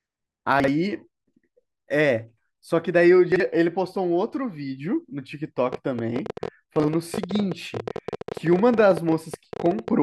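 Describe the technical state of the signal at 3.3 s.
At 3.32 to 3.40 s the speech has chunks out of order: two 40 ms pieces are swapped, with one chunk arriving a single slot late and playing after the piece that should follow it. The result is a brief jumbled flicker with three hard joins. Unlike a dropout, nothing is missing, and unlike a stutter, nothing repeats. The sound is complete but scrambled in sequence.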